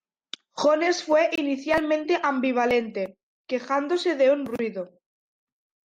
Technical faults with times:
1.35-1.38 gap between chunks

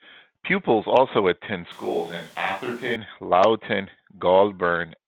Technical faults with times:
1.72-2.96 switch to a distant microphone

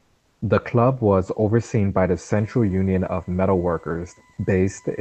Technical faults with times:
0.00-0.41 comfort noise in place of the background

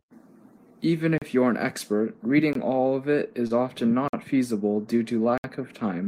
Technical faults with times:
1.18-1.22 block of digital silence
2.53-2.55 block of digital silence
3.47-3.52 short concealed packet loss
4.08-4.13 block of digital silence
5.38-5.44 block of digital silence

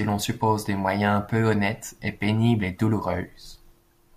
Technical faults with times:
none

